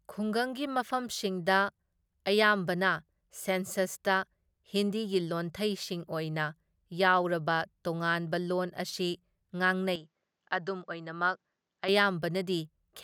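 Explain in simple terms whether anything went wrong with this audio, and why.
From 9.96 to 11.89 seconds the speech turns dull and boxy, a little quieter, with faint new background noise, then clears again. That points to a likely input switched to a poorer device. A simple tone filter would not change the background noise or loudness.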